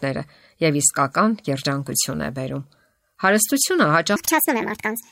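Speech, with a section at the wrong speed from 4.16 s to the end at 5.11 s. That stretch plays 1.57 times too fast. Pitch rises with it by about seven semitones, so the voice turns high and hurried. The likely cause is playback against the wrong clock.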